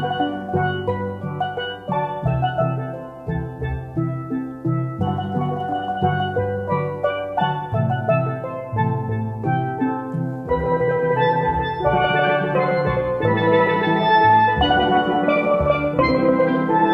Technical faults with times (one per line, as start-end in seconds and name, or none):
none